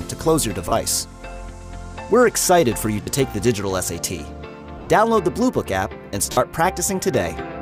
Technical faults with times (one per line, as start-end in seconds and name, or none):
0.69-0.72 lost LE Audio frames
3.02-3.07 lost LE Audio frames
4.78-4.90 lost LE Audio frames
6.32-6.37 lost LE Audio frames